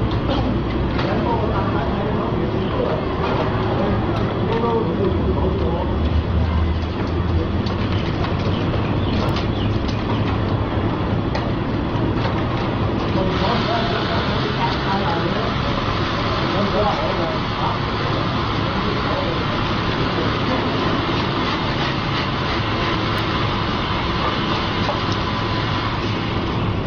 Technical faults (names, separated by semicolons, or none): bit error spike